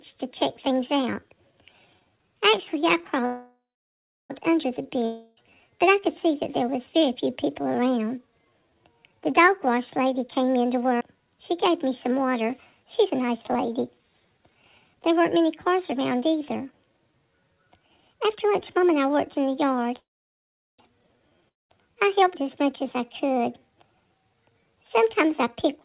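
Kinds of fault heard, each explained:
call audio freeze: At 3.26 s and 19.96 s the sound turns into a fading buzz, then about 0.71 s and 0.76 s of silence, and resumes from where it stopped about 1.04 s and 0.82 s later. Nothing is lost. Likely cause: delayed packets emptied the jitter buffer.
long network dropout: From 5.05 s a fading fill replaces about 0.32 s of audio, and near 21.5 s a brief buzz gives way to about 0.19 s of silence. Both resume further on with material missing, likely because packets never arrived.
jitter buffer speed-up: From 10.25 to 19.94 s the sound runs about 8% fast at unchanged pitch, and from 23.39 s to the end about 9% fast, so it feels hurried. The receiver trimmed short pitch-period pieces to drain an overfull buffer, roughly 0.7 s and 0.2 s in total.
skip ahead: At 11.00 s playback jumps forward with almost no gap, and roughly 150 ms of audio is gone. The two sides join nearly directly, because that stretch was dropped while later audio was already waiting in the buffer.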